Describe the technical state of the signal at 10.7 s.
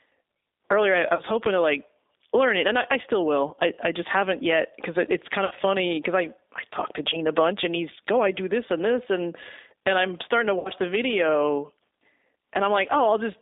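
At 10.7 s the signal is just leaving a stretch of VoIP packet loss concealed by the speech codec, running from 10.59 to 10.71 s between "and I'm starting to" and "the video". About 60 ms of audio went missing, consistent with three 20 ms packets, and the decoder filled the gap by extending its last pitch and filter with falling gain. Unlike a hard dropout, there is no silence. The gap is bridged by a buzzy tone or coloured noise that fades, and the sound stays weak for a moment after the data returns. Underneath, the whole line carries G.729 codec damage, plainly audible at 8 kbit/s. Only roughly 300 Hz to 3.7 kHz passes, but beyond simple telephone band-limiting the speech is rebuilt from a few pulses per frame, which gives it a rough, slightly synthetic texture.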